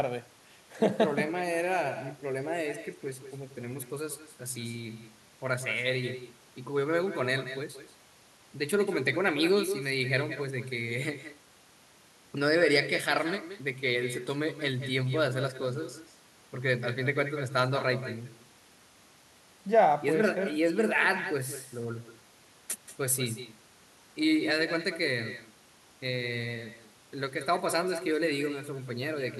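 Echo with no canceller runs throughout: the far end's loudspeaker leaks into its microphone, returning each phrase about 11 dB quieter, roughly a fifth of a second late.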